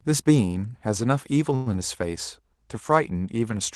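A speech recording carried over a call link whose band stops near 12 kHz, which fits Opus at a moderate bitrate. At 1.55 s there is a call audio freeze lasting until about 1.74 s. The last sound is stretched into a brief fading buzz or hiss for roughly a tenth of a second. Then the speech resumes where it left off. Nothing is lost, but everything after runs about 108 ms late. The likely cause is delayed packets draining the jitter buffer.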